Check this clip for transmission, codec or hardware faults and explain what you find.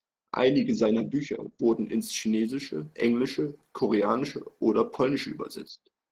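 One codec fault runs through the whole of the speech: Opus voice compression. The damage is plainly audible, at a level that points to a low bitrate around 16 kbps with the coder in hybrid mode. A linear-prediction coder carries the band below 8 kHz, and a coarse transform layer carries the band above it. The excitation is coded roughly in what sounds like 20 ms frames, so the speech comes out hoarse and slightly robotic. On a spectrogram the harmonics below 8 kHz look smeared, and the energy above 8 kHz is patchy and blocky.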